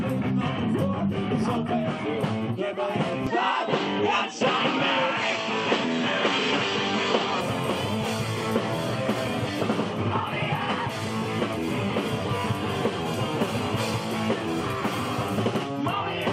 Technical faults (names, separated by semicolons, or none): input switched to a poorer device